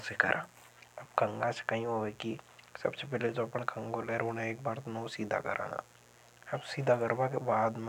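Switching spikes from a dimmer, rectifier or unshielded line get into the signal path, adding a mains buzz on 60 Hz harmonics that reach into the kilohertz range. Throughout the speech it sounds like a steady, raspy buzz, roughly 30 dB below the signal.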